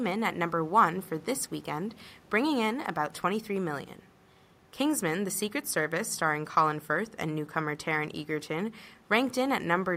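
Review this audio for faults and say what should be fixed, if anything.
No faults found in the speech; nothing to fix.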